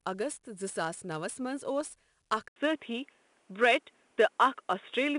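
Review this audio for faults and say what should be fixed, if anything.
A gritty hiss rides on every loud passage for the whole clip, with roughness on sharp attacks and nothing above 10.6 kHz. This is 4-bit ADPCM compression, whose coarse adaptive steps leave level-following noise. The rate fits a 22 kHz sample rate. Prevent it by recording and delivering in 16-bit PCM or a modern codec.

At 2.48 s the sound drops out for 80 ms, then continues duller and boxier to the end. Nothing passes above 3.8 kHz, the level shifts by several dB, and a faint new noise floor appears. This is most likely an input switched to a poorer device, such as a headset call profile. Prevent it by locking the recording input to one microphone for the whole session.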